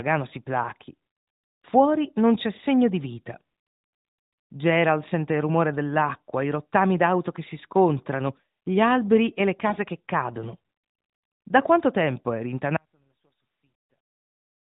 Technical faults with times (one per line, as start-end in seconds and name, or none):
9.66-9.79 AMR bit errors
11.54-11.67 AMR bit errors
12.77-14.80 audio dropout to a faint residue